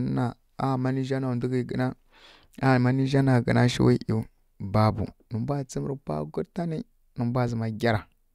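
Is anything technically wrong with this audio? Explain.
No, nothing technically wrong can be heard in this speech recording.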